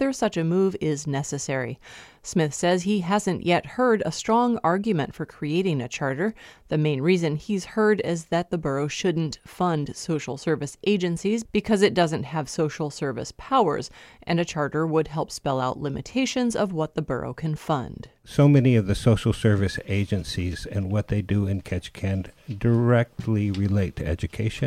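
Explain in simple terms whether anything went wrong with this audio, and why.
Nothing went wrong with this audio. Listening through, there are no faults to point to at any moment in the recording.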